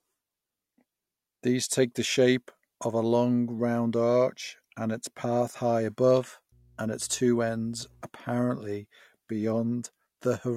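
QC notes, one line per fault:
6.52–8.02 s, mains hum: a steady low 60 Hz tone sits about 30 dB under the speech. Power-line interference, likely from a ground loop, leaks into the signal.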